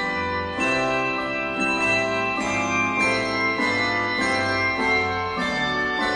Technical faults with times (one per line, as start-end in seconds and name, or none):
none